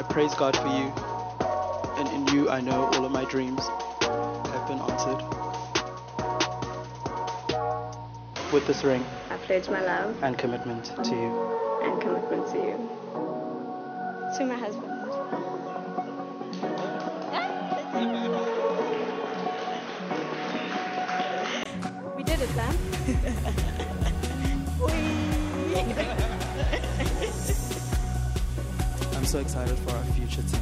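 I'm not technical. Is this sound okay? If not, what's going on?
No. From the start until about 21.65 s, the sound is dull and boxy, with nothing above 6.4 kHz and a faint background noise. At 21.65 s there is a very short gap, about 20 ms, and then the sound opens up and is clearer, at about the same loudness. The likely cause is an input switched to a poorer device: a lower-quality microphone or headset was recording first, and the system then changed to a better one.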